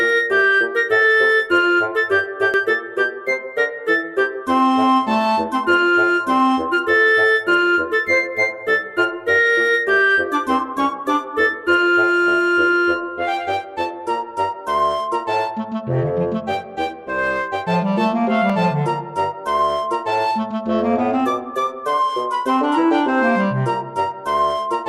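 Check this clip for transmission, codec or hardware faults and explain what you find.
Two brief glitches stand out. At 2.54 s and 18.50 s the audio skips forward, losing about 30 ms and about 10 ms. The likely cause is a dropped buffer (overrun): samples were overwritten before being read, so the surrounding audio was joined directly.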